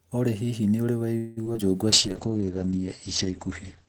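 Right after "hihi nĩ ũrĩ", from 1.17 to 1.59 s, repeated packet loss (robotic sound) leaves several gaps, the longest about 0.19 s. Each is patched by extending the previous sound, so roughly half the stretch sounds choppy and robotic.

From 1.88 to 2.46 s, a jitter buffer slow-down repeats short pitch periods to rebuild its reserve. It adds 58 ms, so the sound drags at about 91% speed with unchanged pitch.

From 1.92 s to the end, a call bitrate drop makes the sound coarse and muffled. The bandwidth narrows from 20 kHz to 8 kHz, which fits a fall from around 32 to 9 kbps.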